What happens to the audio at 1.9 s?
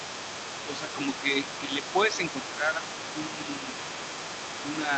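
At 1.9 s the echo canceller is likely struggling with double talk: the far-end voice arriving over the loudspeaker overlaps the near talker, and unable to tell the two apart, the canceller turns everything down. This speech suppressed in double talk runs from 1.61 to 1.95 s, and across around 200 ms of that span the near voice dips by up to about 5 decibels, sounding briefly pulled back.

Underneath, and running through the whole clip from 0 to about 5 s, is the other side's voice leaking through. The leak is present at 1.9 s too. The talker's device plays the far end on a loudspeaker, and the microphone picks it back up. Residual echo is the likely cause, with the canceller failing to subtract all of it. The leaked voice sits roughly 10 dB below the main speech, audible as a second talker.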